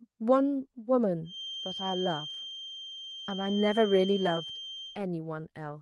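A speech clip with a feedback whistle. From 1.22 s to 5.02 s a thin, steady tone sits behind the speech at 3.2 kHz. It stays roughly 10 dB below the speech and swells and fades slowly in level. It never builds or runs away. The likely cause is a loudspeaker-to-microphone loop held just at the edge of feedback. One frequency keeps circulating through that loop and rings on.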